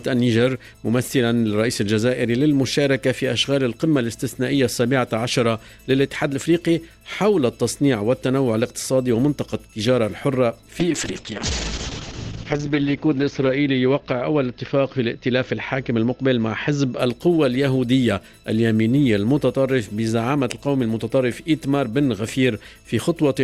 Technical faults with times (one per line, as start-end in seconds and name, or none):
10.80-17.05 call bitrate drop